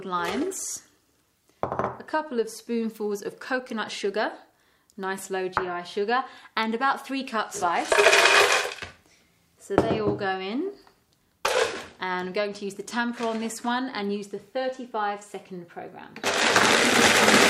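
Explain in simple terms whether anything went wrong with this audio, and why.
Nothing went wrong here; there's no problem anywhere in this recording that you'd need to worry about.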